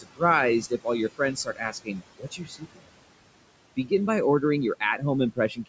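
Noise suppressor artifacts run through the whole clip. The suppressor pulls the background down by about 21 dB in gaps and releases it under speech, so the leftover noise sinks between words and rises under them. The room noise, sitting about 14 dB below the speech, is what gets pumped.

Speech cut by the noise suppressor occurs at 0 to 0.22 s, 0.61 to 0.87 s, 1.09 to 2.02 s, 2.18 to 2.88 s and 5.32 to 5.68 s. Here the suppressor misreads quiet speech as noise and drops it by about 17 to 21 dB. Each cut lasts from roughly a tenth to half a second, leaving syllables swallowed and faint.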